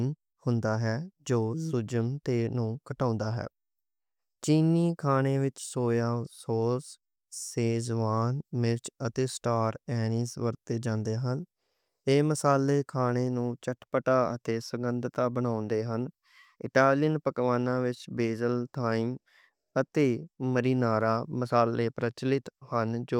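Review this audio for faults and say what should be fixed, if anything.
Nothing stood out on listening to this speech recording, so there is nothing here that needs fixing.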